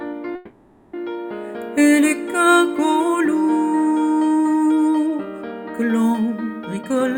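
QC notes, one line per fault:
0.35 to 0.95 s, call audio freeze: sound stalls into a fading buzz for about 580 ms, then resumes where it stopped, nothing lost, likely packets held up and the jitter buffer running dry.
6.81 to 7.18 s, jitter buffer speed-up: audio rushes at 155% speed, same pitch, as the receiver trims tiny pitch-period slices, about a fifth of a second in total, to shed backlog.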